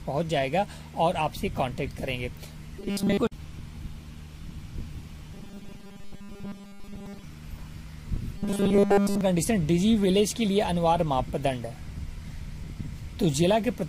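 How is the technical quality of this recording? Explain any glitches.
The recording has three stretches of robotic sound from repeated short buffers: 2.80 to 3.17 s, 5.34 to 7.23 s, and 8.36 to 9.21 s. In each, the sound turns into a rigid, metallic buzz pitched at 200 Hz. The likely cause is playback running short of fresh audio and filling the gaps by looping a 5 ms slice, skipping most of the real signal in those spans.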